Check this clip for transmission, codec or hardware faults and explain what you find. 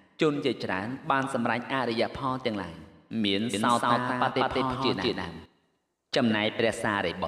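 There's one fault: a doubled audio track from 3.54 to 5.46 s. A second copy trails about a fifth of a second behind, at roughly equal level, likely from a slower capture path picking the signal up again. It sounds like a clean, dry slapback echo that cuts in and out abruptly.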